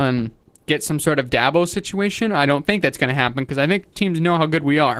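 From start to finish the speech carries plainly audible Opus voice compression, consistent with hybrid mode at about 16 kbps. SILK's linear prediction codes the band below 8 kHz with a coarse excitation, giving a hoarse, faintly robotic edge. A thin CELT layer keeps fullband content above it. On a spectrogram, harmonics look smeared and grainy, and the region above 8 kHz appears patchy and blotchy, with blocky changes that point to 20 ms frames.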